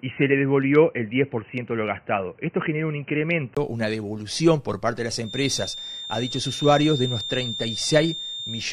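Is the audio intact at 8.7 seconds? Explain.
No. At 8.7 seconds a feedback whistle sits behind the sound. It begins at 5.20 s and runs to the end of the clip. It is a thin, steady tone at 3.6 kHz, roughly 10 dB below the main sound, swelling and fading slowly in level. The likely cause is a loudspeaker-to-microphone loop held right at the edge of feedback. One frequency keeps ringing there, but it never grows into a runaway howl.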